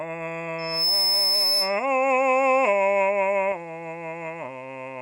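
From 0.58 s to 1.86 s, loudspeaker feedback squeal rises over the music: a single 5.2 kHz tone swells over roughly a third of a second to sit around 5 dB above the music. That growth marks a microphone-to-speaker loop running away, not a steady interference tone.

At 3.52 s the sound abruptly turns duller, with nothing above 11.4 kHz. Level drops by roughly 5 dB and a new noise floor appears about 35 dB down, all with no gap. That combination, rather than a plain filter, points to an input switched to a poorer device, likely.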